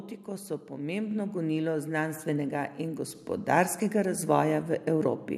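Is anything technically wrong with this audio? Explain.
Yes. The microphone volume is stepped up four times, at 1.11, 2.13, 3.15 and 4.17 s, by about 4, 3, 4 and 2 dB. Each time the input level is raised in one jump, so the speech and the background noise get louder together. That shared, instant rise sets it apart from a speaker moving closer or a smooth gain ride.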